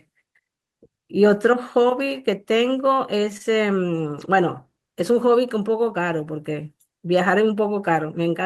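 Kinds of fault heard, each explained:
Short concealed packet loss: about 20 ms of speech arrived too late, and the receiver covered roughly 26 ms by extending the prior sound, leaving a brief smear near 3.4 s.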